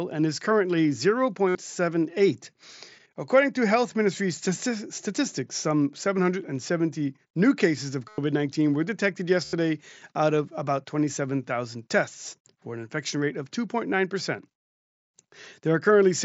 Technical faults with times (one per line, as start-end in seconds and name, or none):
1.48-1.55 concealed Bluetooth headset packet loss
8.08-8.18 concealed Bluetooth headset packet loss
9.45-9.53 concealed Bluetooth headset packet loss